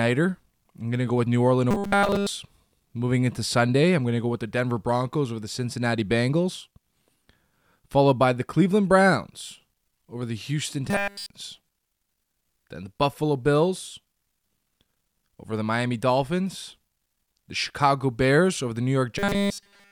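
Robotic sound from repeated short buffers hits at 1.71–2.29 s, 10.90–11.30 s and 19.19–19.92 s. The speech turns into a flat metallic buzz at 200 Hz, likely from a 5 ms chunk looping nonstop.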